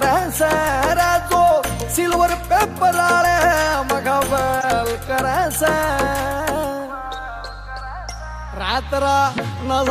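At 4.61 to 4.64 s, a corrupt frame is decoded. Damaged bits in a single frame place energy at wrong frequencies, giving a fairly loud, brief chirp, squeak, blip or burst of noise.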